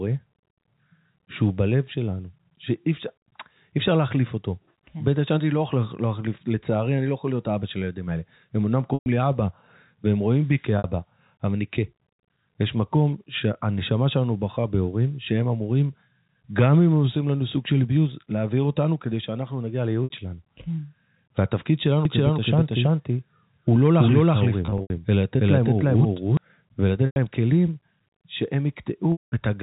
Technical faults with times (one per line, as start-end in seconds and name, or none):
8.94-9.06 packet loss with pitch repetition
10.78-10.84 packet loss with pitch repetition
20.04-20.10 packet loss with pitch repetition
22.05-26.37 doubled audio track
24.66-24.90 packet loss with pitch repetition
27.06-27.16 packet loss with pitch repetition
29.12-29.32 packet loss with pitch repetition